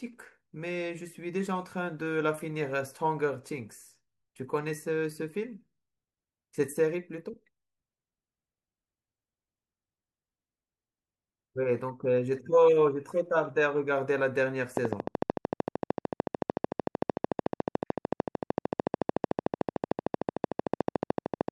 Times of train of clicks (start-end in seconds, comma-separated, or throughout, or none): 14.77-21.49